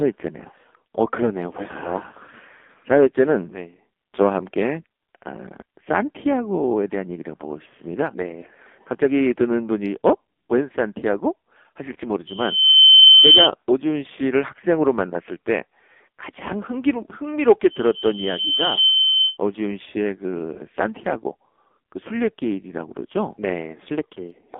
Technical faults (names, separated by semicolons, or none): AMR narrowband mobile codec; lost AMR speech frames; loudspeaker feedback squeal